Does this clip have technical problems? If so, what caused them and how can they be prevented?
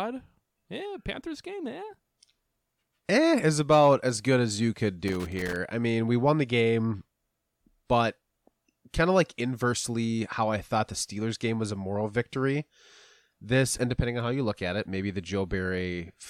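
Yes. A loose connector crackle runs from 5.08 to 5.56 s, between "good as you could" and "I mean we won". A worn or dirty contact was intermittently making and breaking, chopping the speech, so roughly half a second of irregular scratchy crackle sits over the audio. Cleaning or replacing the connector and securing the cable against movement would prevent it.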